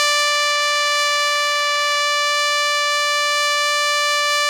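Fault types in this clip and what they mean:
Timecode bleed: a steady chirping warble sits behind the music from 0 to 2 s, roughly 20 dB below it, flipping between pitches near 1 kHz and 2 kHz. Linear timecode at 25 frames per second has leaked in from a neighbouring track or cable.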